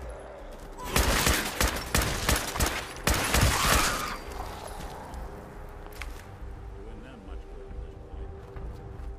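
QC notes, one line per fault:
0.14–8.99 s, clock drift buffer slips: a regular click or pop recurs every 1.48 s, about seven in all, evenly spaced. That steady spacing likely comes from two devices running on separate clocks, off from each other by several hundred ppm, so the buffer between them creeps until it has to drop or repeat a small block of a few dozen samples. Each jump breaks the waveform and we hear a tick.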